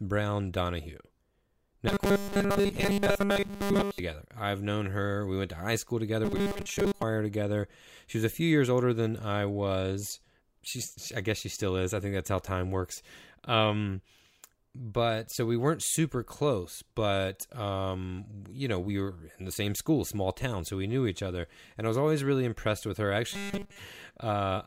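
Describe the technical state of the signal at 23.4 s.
At 23.4 s the signal has robotic sound from repeated short buffers, running from 23.31 to 23.79 s. Essentially all of that span is a repeated fragment, likely because audio arrived too seldom. A 5 ms loop imposes a rigid, metallic 200 Hz buzz.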